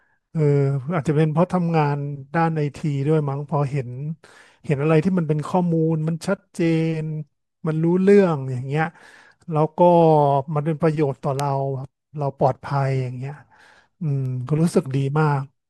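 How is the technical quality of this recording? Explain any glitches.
Two glitches stand out in the speech. Both are bit error spikes. One comes at 11.40 s and one at 14.26 s. In each, a flipped bit shifts a sample value by a power of two, and it snaps straight back. The first spans three samples and peaks at about -4 dBFS. It gives a sharp tick. The second spans two samples at about -28 dBFS. It is a sharp tick too. Both are broadband and have nothing to do with the speech.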